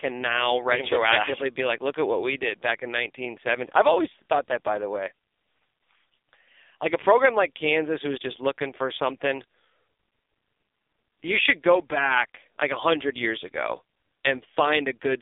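From start to finish the speech carries the sound of the AMR narrowband mobile codec, the 2G/3G phone coder. Everything above roughly 3.6 kHz is gone and the low end thins out below about 300 Hz, giving a boxed-in telephone band. The coding is heavy, fitting a low mode near 5.9 kbps, so each 5 ms gets only a few excitation pulses, and the voice comes out buzzy, rough and noticeably synthetic.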